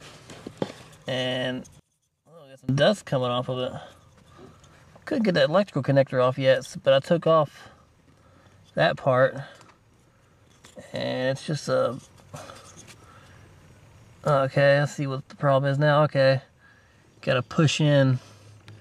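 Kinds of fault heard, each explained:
One channel inverted: from 1.79 to 2.69 s the sound drops by about 26 dB, likely because one polarity-reversed channel cancels shared content when summed to mono.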